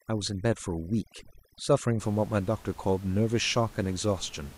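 Speech, with overdone noise removal from 0.0 to 2.0 s: an overly aggressive noise reducer strips bands near its noise estimate, leaving twinkling near-silence, with room noise about 24 dB below the voice.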